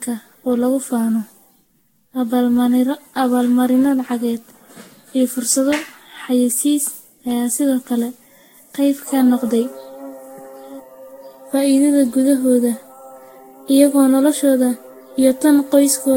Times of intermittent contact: none

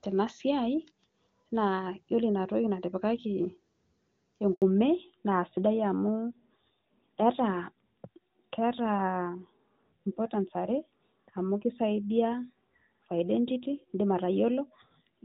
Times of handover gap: 4.54-4.62

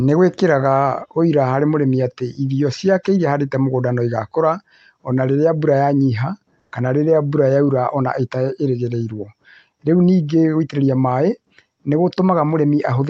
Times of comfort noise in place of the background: 6.59-6.71

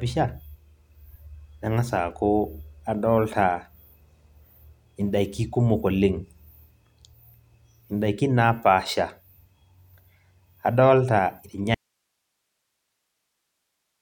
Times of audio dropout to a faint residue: 11.74-14.01

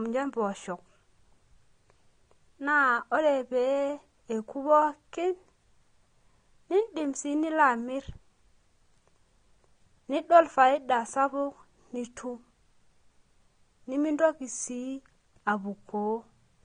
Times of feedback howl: none

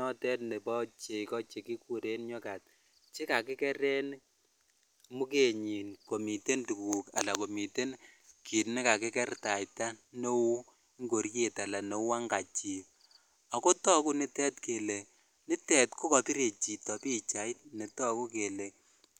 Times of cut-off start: none

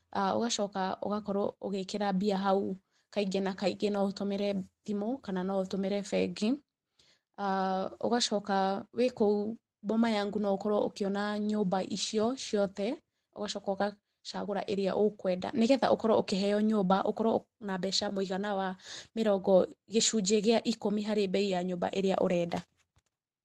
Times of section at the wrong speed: none

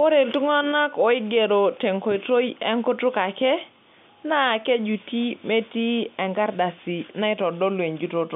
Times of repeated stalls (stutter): none

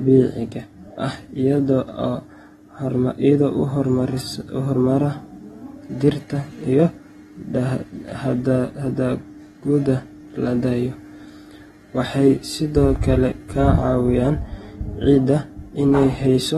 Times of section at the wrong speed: none

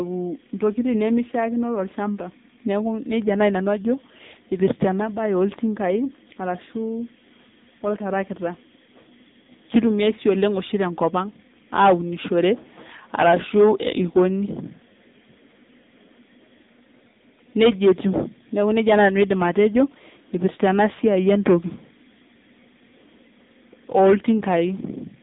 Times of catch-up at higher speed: none

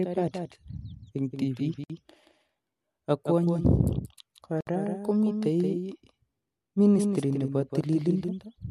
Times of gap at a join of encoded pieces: 1.84-1.90, 4.61-4.67

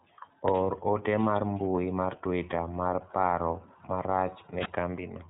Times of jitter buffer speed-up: none

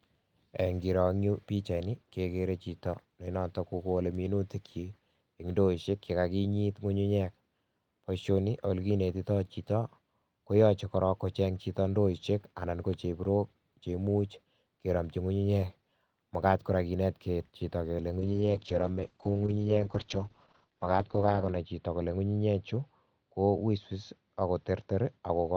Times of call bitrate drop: 18.20-25.57

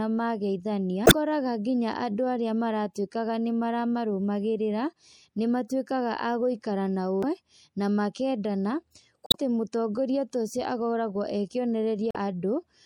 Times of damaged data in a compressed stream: 1.03-1.13, 7.20-7.24, 9.26-9.36, 12.11-12.16

